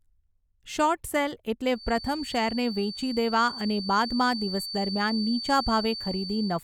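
Speech, with a feedback whistle entering at 1.68 s, just after "શોર્ટ સેલ", and continuing to the end of the clip. A thin, steady tone at 4.6 kHz sits roughly 10 dB below the speech and swells and fades slowly in level, likely from a loudspeaker-to-microphone loop held right at the edge of feedback. On a spectrogram it shows as a narrow horizontal line at 4.6 kHz. In the waveform it appears as a low-level fill in the pauses between phrases.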